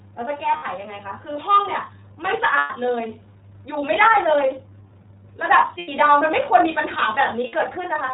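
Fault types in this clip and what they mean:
iLBC codec, throughout: narrowband VoIP coding cuts everything above 4 kHz, leaving the speech dull, slightly rough and synthetic, with plainly audible damage that fits a 30 ms frame mode.
Lost iLBC frames, at 0.57, 2.57, 5.79 and 7.47 s: missing packets are concealed by repeating the last pitch cycle with noise, giving brief buzzy held-vowel patches, the longest about 0.15 s near 2.6 s.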